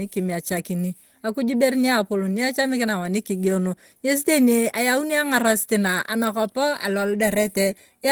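Throughout, the speech sounds hoarse, muffled and grainy, with audio still reaching about 20.2 kHz. This is likely Opus compression at a low bitrate, which fits hybrid mode at around 16 kbps.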